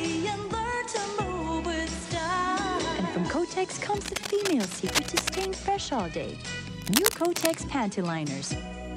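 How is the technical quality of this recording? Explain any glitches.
Two bursts of cable scratch noise affect the quality. The likely cause is a worn cable, connector or control being handled, so its contact resistance jumps about erratically and injects dense, uneven noise into the signal. From 3.97 to 5.46 s a scratchy rustling runs over the sound a little below its level. From 6.78 to 7.55 s a second burst arrives at roughly the same loudness as the sound itself, briefly competing with it.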